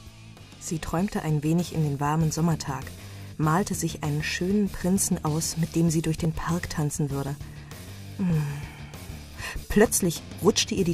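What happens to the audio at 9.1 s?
At 9.1 s the audio is inside a run of periodic USB or driver dropouts (5.22–10.35 s): every 1.02 s, a blocked driver skips about a millisecond, heard as a tick. Each shows as a waveform discontinuity and a thin vertical spectrogram line.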